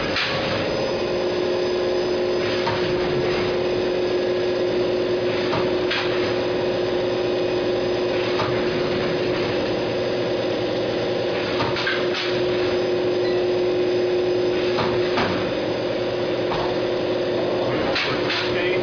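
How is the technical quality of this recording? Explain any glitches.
The technical quality of this recording is good, and there are no glitches to explain.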